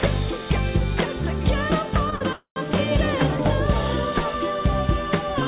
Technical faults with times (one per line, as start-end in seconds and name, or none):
2.10-2.23 short stall from a late packet
2.33-2.58 call audio freeze